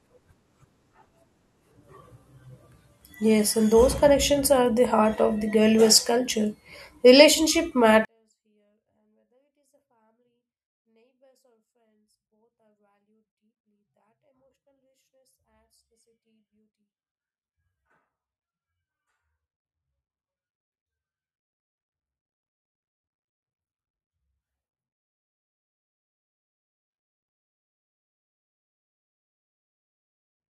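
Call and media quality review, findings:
24-bit alignment error (too quiet), 8.05 s to end. Speech drops about 48 dB instantly, stays clean and undistorted. Capture or driver format handling: low-byte 24-bit samples read as 32-bit. Unlike dropout or fade: abrupt, constant, no ramp.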